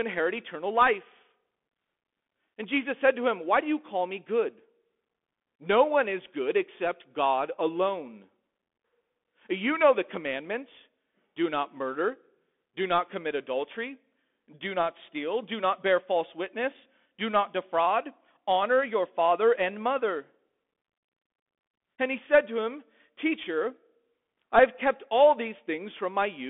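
From start to finish, the speech carries the sound of a Bluetooth CVSD headset codec. The codec sends one bit per sample, each saying only up or down, with an adapting step size. The sound fits a 64 kbps link. Nothing above 3.8 kHz gets through, and the usable band sits near 250 Hz to 3.5 kHz. The damage is plainly audible. Loud bright sounds outrun the step and distort. S sounds turn scratchy, and a granular hiss lies beneath the speech.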